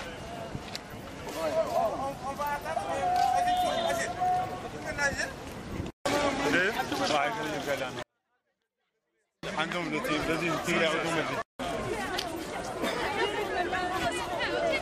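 From 8.03 s to 9.43 s the level plunges by about 48 dB with no fade: a 24-bit alignment error, where 24-bit samples sitting in the low bytes of a 32-bit word are read as full 32-bit integers. Unlike a dropout, the sound persists, clean but nearly inaudible.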